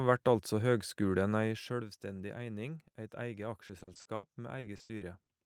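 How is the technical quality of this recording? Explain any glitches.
The recording has one clear fault, in its final second and a half. From 3.67 to 5.29 s, repeated packet loss (robotic sound) breaks up the speech. Around a dozen short gaps, none longer than 80 ms, are each patched by extending the preceding sound, filling about 480 ms, roughly 30% of that stretch. The result is choppy speech with fragments missing.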